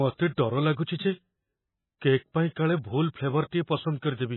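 From start to finish the speech sounds watery and swirly, with s sounds smeared into metallic chirps and nothing at all above 4 kHz, so the top end is dull and boxed-in. The damage is heavy and points to MP3 compression at a very low rate, roughly 17 kbps. The likely cause is an encoder starved of bits, cutting the treble at a fixed point and dropping weak frequency detail that flickers on and off between frames.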